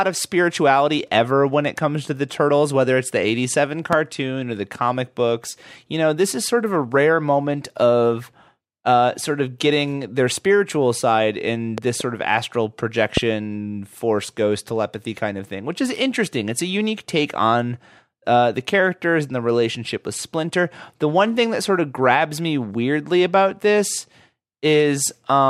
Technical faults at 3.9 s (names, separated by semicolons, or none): loud pop